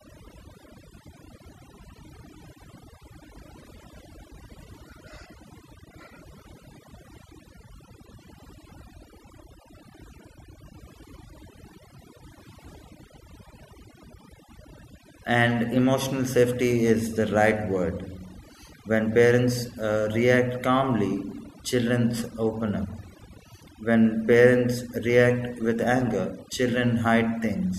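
Overdone noise removal runs through the whole recording. A noise reduction stage set far too aggressively pulls individual frequency bands down to nothing whenever their level sits close to what it has judged to be noise, and it cannot tell quiet parts of the speech from noise. The gaps between phrases collapse into near silence sprinkled with twinkling, chirpy specks.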